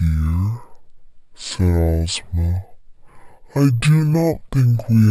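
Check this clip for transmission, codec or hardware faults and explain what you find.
One fault runs through the whole clip: stereo read as mono. The left and right samples are played one after another as a single channel. So the speech runs at half speed, 0.5 times normal. It sits a full octave low, 12 semitones down.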